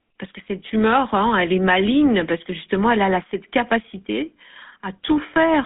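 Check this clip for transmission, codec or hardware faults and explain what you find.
Two faults are present: GSM coding throughout and one brief frame loss near the end.

GSM full-rate codec, throughout: the speech is cut to roughly 200 Hz to 3.5 kHz and carries a buzzy, gravelly grain, consistent with 13 kbps full-rate coding. Unlike plain band-limiting, it adds texture.

Lost GSM frames, 5.34 to 5.37 s: the last good frame is held briefly as a short metallic ring, fitting one concealed 20 ms frame. Unlike a dropout, there is no silent gap.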